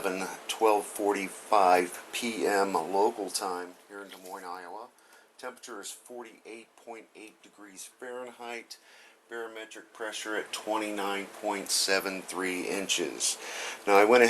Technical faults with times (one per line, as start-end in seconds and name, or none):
none